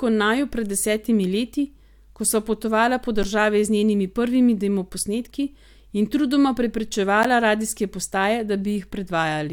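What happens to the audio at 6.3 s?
Nothing goes wrong at 6.3 s; the speech carries on intact through that moment, with no dropout, click, distortion or other fault.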